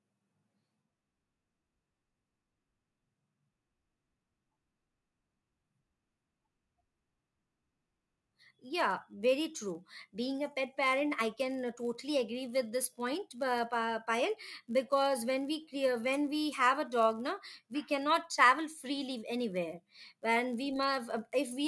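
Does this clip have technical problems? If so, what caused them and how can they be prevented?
Yes: the resampler restarted on every block throughout, converting 48 kHz to 24 kHz in 10 ms chunks with no shared history. Each chunk edge gets a small error, and at that spacing the errors fuse into a 100 Hz buzz that rides on the speech and drops away in pauses. Keeping one continuous resampler instance whose filter state carries across block boundaries prevents it.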